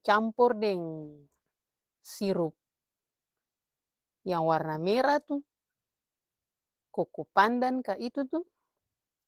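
From start to end the speech sounds slightly hoarse and robotic, with plainly audible Opus voice compression: a hybrid mode pairs linear-prediction coding of the lower band with a coarse transform layer above 8 kHz, at a bitrate that points to around 16 kbps.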